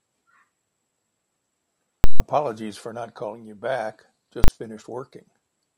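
Invalid numbers at full scale hit this speech clip twice. From 2.04 to 2.20 s, just before "for not calling you", a calculation yields infinite or invalid values that are clamped to the extreme sample value. The output sits flat at one extreme value, far beyond the speech peaks, for 160 ms, heard as a very loud pop at each edge with nothing in between. At 4.44 to 4.48 s, right after "not calling you back", the same fault lasts only 40 ms and collapses into one bang.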